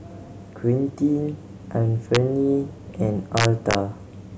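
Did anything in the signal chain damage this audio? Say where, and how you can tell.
Yes. There is integer overflow in the speech, from a gain or sample-format conversion stage. A single violent crack occurs at 2.15 s, where the peak reaches the integer limit. A longer burst of cracks runs from 3.37 to 3.75 s, where the peaks go about 2 dB past the limit. These are far sharper than clipping. Instead of holding at full scale, each excess peak wrapped to the opposite sign and flipped across the entire range.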